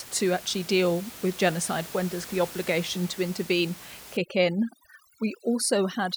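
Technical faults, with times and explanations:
4.17–6.16 s, overdone noise removal: just after "the obligation to intervene", the room noise, which sat about 17 dB below the speech, collapses to near silence scattered with twinkling specks until the end. A spectral noise reducer set too aggressively is pulling individual frequency bands down or out whenever they come close to its noise estimate, so isolated bins flicker on and off in the gaps and the quieter components of the speech are removed along with the noise.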